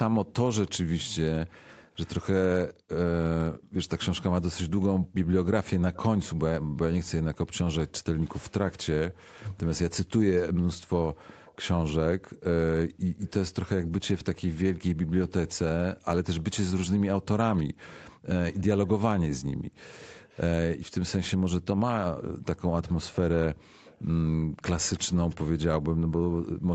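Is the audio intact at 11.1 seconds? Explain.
No. An echo leak runs from 5.94 to 13.32 s. A faint copy of the speech returns about 0.32 s late, likely from an echo canceller missing loudspeaker pickup.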